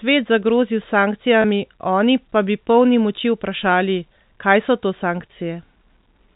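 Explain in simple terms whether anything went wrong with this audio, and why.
At about 1.42 s the speech briefly sticks on a slightly buzzy, held sound for about 20 ms, then carries on. This is packet loss with pitch repetition: a tiny piece of this G.711 telephone audio went missing, which fits a single lost packet. The receiver filled the gap by repeating the last cycle of the voice.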